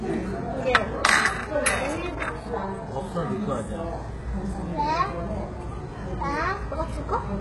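From start to end, nothing sits above 11.5 kHz. The treble sounds gritty and metallic, heavily damaged. This is likely HE-AAC compression, at a rate that fits about 12 kbps. Copied lower bands rebuild the top, so harmonics misalign.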